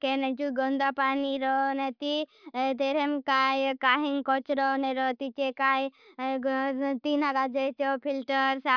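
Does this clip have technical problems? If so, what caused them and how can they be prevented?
No, this clip has no technical problems, so there is nothing to prevent.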